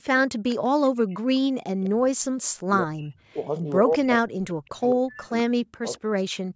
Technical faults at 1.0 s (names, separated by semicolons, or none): echo leak